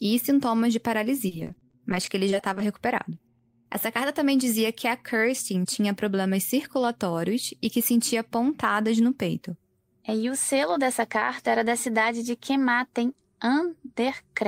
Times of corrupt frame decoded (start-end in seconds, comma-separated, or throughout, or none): none